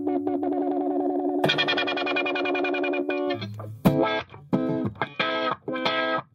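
Pre-emphasis left on from 0.0 to 3.94 s: an FM 75 µs treble boost went uncorrected, lifting 10 kHz about 13 dB over 1 kHz, so the sound is thin, bright and sibilant.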